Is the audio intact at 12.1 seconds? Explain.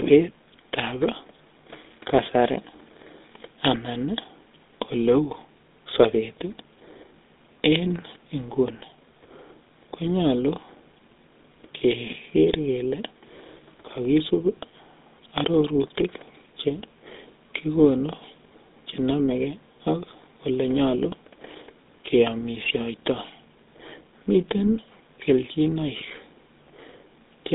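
No. At 12.1 seconds, as everywhere in this speech clip, the GSM full-rate codec is audible. The coder rebuilds the voice from a vocal-tract model excited by regularly spaced pulses, which fits a 13 kbps stream, and the line passes roughly 250 Hz to 3.7 kHz with nothing above 3.8 kHz. What separates it from a simple telephone band-limit is the plainly audible buzzy, gravelly roughness laid over the voiced sounds, not just the missing highs.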